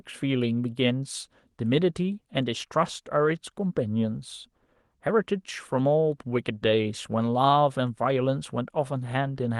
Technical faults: none

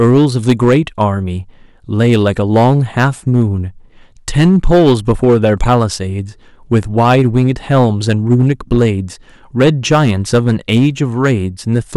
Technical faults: hard clipping

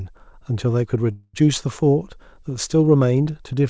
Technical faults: call audio freeze

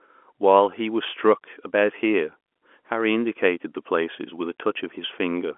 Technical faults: none

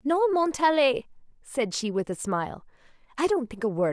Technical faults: none

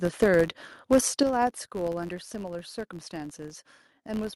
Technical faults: filter restarted on every block; microphone overload; microphone volume stepped down

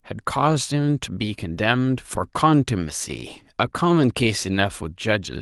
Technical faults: none

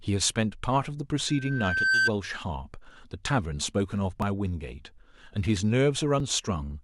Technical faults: loudspeaker feedback squeal; overlap between stream segments

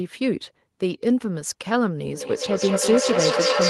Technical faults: feedback echo between two devices

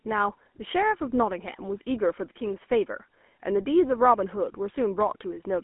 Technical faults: GSM full-rate codec

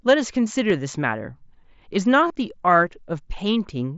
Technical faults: concealed Bluetooth headset packet loss

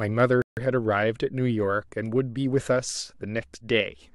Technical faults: rebuffering stall

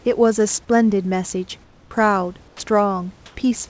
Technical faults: comfort noise in place of the background; sound dropped by the voice detector

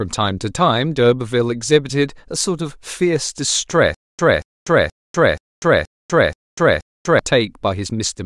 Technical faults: stutter with silent gaps

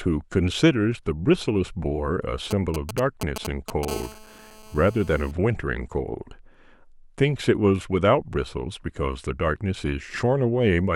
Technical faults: GSM signalling bursts; GSM phone buzz

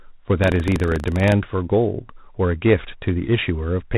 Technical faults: G.726 ADPCM; buffer tearing

